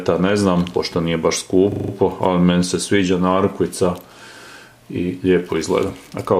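From 1.72 to 1.92 s the sound locks into a rapid rattling buzz: one 40 ms fragment repeats exactly five times, giving a pulse at 25 Hz before normal playback resumes, with essentially nothing missing afterward. This is a system hang loop. The computer or its audio driver stalled while the sound hardware kept replaying the same stretch of its ring buffer, which fits a buffer about 40 ms long, until the system recovered.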